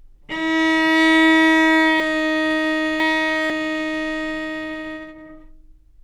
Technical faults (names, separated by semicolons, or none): chunks out of order